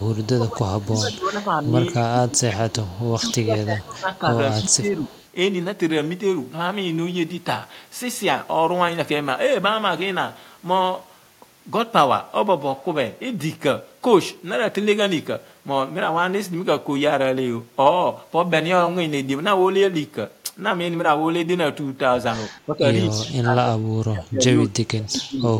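Speech recording with faint delayed repeats at 0.14–0.18 s, 2.84–3.08 s and 4.7–5.26 s, trailing the talker by 218 ms and sitting roughly 25 to 30 dB below the direct sound. This is echo leak, likely a far-end loudspeaker echo canceller letting residual pickup slip back down the line. The voice also dips and breaks up in pieces between 0.22 and 5.11 s, about three seconds of it affected, with drops of around 20 dB, and again from 22.66 to 25.5 s, roughly two seconds affected and sinking by around 35 dB. That is speech suppressed in double talk, likely an echo canceller confusing the talker with loudspeaker echo while both sides spoke and attenuating everything.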